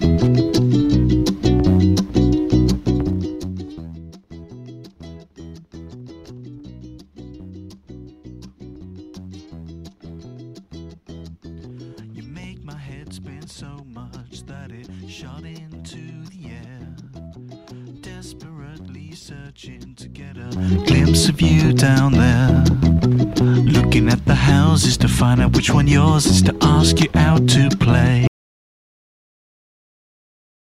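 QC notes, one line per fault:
2.77–4.02 s and 20.35–20.77 s, zipper noise: a level drop of roughly 20 dB, then later a rise of similar size, each applied in 1 dB steps with no smoothing between them. Every step puts a small click into the waveform, so the moves carry an audible ticking: around twenty ticks a second on the slow fade-down, a faster buzz of around fifty a second on the quick fade-up.
28.28 s to end, audio dropout to silence: the sound cuts off mid-flow and the remaining 2.4 s are silent, with no room tone or noise floor. That total absence of background points to input loss rather than a quiet passage. The likely cause is the source being disconnected or muted while recording continued, writing silence. Whatever followed the cut is not present in the file.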